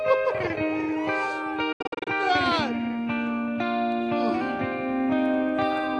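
From 1.72 s to 2.07 s there is a digital broadcast dropout. The receiver lost good frames and muted until they returned. The sound breaks into several short holes over 336 ms, each fading out in 8 ms. The longest lasts 72 ms. About 216 ms is lost.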